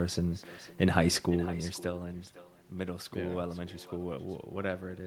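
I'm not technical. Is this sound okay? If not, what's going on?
No. Echo with no canceller runs through the whole clip: the far end's loudspeaker feeds its microphone, so every phrase returns about half a second later as a fainter, hollow copy.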